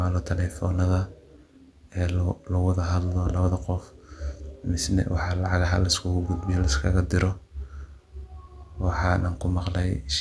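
No technical faults can be heard in this recording.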